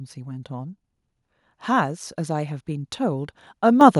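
At 3.81 s, near the very end of the speech, the microphone volume is stepped up. The level jumps by about 7 dB in a single step. The calling software judged the microphone too quiet and raised the device's input volume. Because the change happens before any processing, the voice and the background rise together. Nothing fades in. The sound simply becomes louder all at once and stays there.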